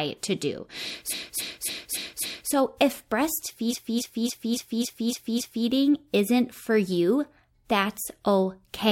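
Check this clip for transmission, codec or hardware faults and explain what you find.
Two bursts of repeated frames show up in this speech clip. From 1.09 to 2.49 s, a block of about 279 ms plays five extra times. From 3.69 to 5.64 s, the same-length block plays seven extra times. A short run of compressed frames, which fits roughly six frames, was sent or written more than once, so the decoder kept replaying it. You hear a stuttering loop, and the two bursts stretch the audio by about 1.4 s and 2.0 s.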